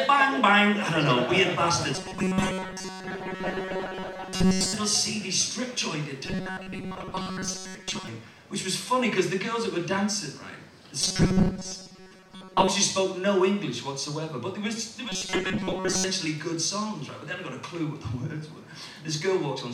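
A rigid, metallic buzz pitched at 188 Hz appears four times: from 1.95 to 4.75 s, 6.26 to 8.07 s, 11.01 to 12.68 s, and 15.09 to 16.06 s. Only the rough contour of the original sound survives underneath. This is robotic sound from repeated short buffers, likely because new audio arrived too seldom. A fragment of about 5.3 ms kept looping, which sets the 188 Hz pitch, while most of the real audio was skipped.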